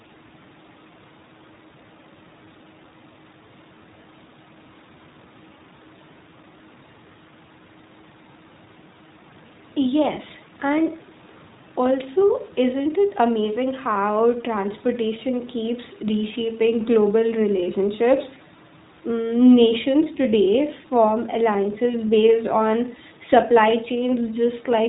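iLBC codec throughout: the speech is band-limited to 4 kHz and sounds plainly rough and synthetic, consistent with iLBC's 15.2 kbps mode coding each 20 ms frame independently.

Lost iLBC frames at 17.64–17.66 s and 21.92–21.96 s: each gap, about one 20 ms frame, is filled by a repeated pitch cycle heard as a brief buzzy held vowel, with clean recovery immediately after.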